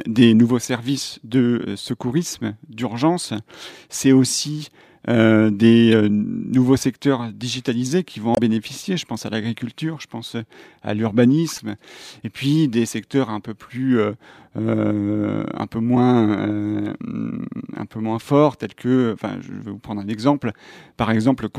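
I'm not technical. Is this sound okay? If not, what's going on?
No, not entirely. This speech clip has three short glitches from damaged data in a compressed stream: at 5.92 s, between "aussi euh des" and "euh nouveaux"; from 8.32 to 8.38 s, right after "digitalisés qui vont"; and from 11.56 to 11.60 s. In each spot a bit of the compressed file got scrambled, so the player lost its place and had to hunt for the next good chunk. You hear a quick chirp or blip.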